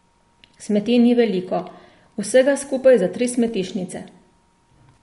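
Throughout, the speech sounds watery and swirly with nothing above 11.2 kHz, likely MP3 compression starved of bits, which fits a bitrate near 48 kbps.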